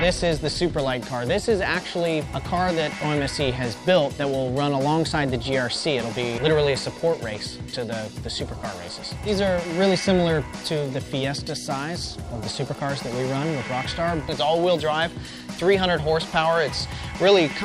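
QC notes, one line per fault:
No technical faults are audible anywhere in the audio.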